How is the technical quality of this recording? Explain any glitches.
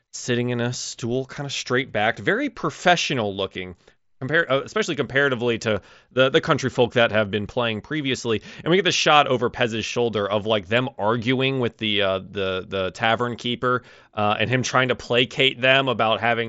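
No glitches can be heard in this speech recording.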